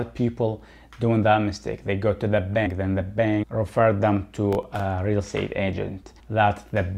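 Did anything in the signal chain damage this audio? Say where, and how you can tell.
Yes. From 4.36 to 4.80 s there is processor overload crackle, a fault at the driver or buffer stage. The burst has a gritty, tearing texture that rides on the sound and stops cleanly once the load passes. Several buffers missed their deadline, and each gap was filled with a replayed scrap of old audio. The tiny spacing of the clicks fits very short buffers of roughly a millisecond and a half. A spectrogram shows thin vertical broadband streaks there, and the waveform shows hard-edged discontinuities.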